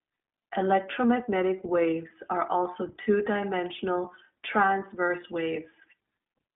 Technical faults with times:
0.00-6.56 iLBC codec

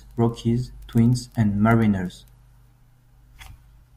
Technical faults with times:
none

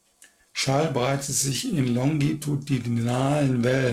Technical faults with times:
0.00-3.92 periodic clock jitter

